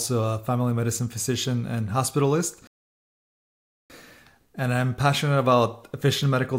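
At 2.67 s the sound stops dead and falls silent until 3.90 s. This is a rebuffering stall. The player used up the audio it had downloaded and had to wait for more to arrive. The gap adds about 1.23 s to the playback. When the sound returns, it picks up exactly where it broke off. Nothing is skipped or repeated. The only damage is the inserted silence and the break in timing.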